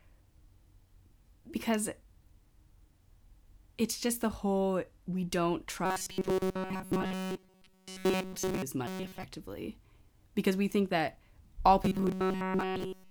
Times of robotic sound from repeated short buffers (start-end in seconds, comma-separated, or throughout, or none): 5.86-8.62, 8.87-9.23, 11.83-13.11